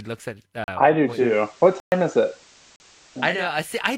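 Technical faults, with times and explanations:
0.64 to 0.68 s, 1.80 to 1.92 s and 2.76 to 2.80 s, blocks of digital silence: the audio drops to silence for 40 ms, 120 ms and 40 ms, then returns at full level with no fade. The two 40 ms blocks register as a short hole, and the 120 ms block as a clear gap. Unlike a network dropout that is smoothed over, nothing is filled in and there is no ramp, just a hard cut to nothing and back.
1.00 to 3.61 s, digital radio blending to analogue: the receiver loses its digital stream and cross-fades over about 405 ms to the FM broadcast of the same station, then fades back near the end. On FM a hiss floor about 30 dB below the signal comes in with the blend. The loudness stays the same. What separates this from a plain noise burst is that the hiss arrives through a gradual cross-fade, then leaves the same way.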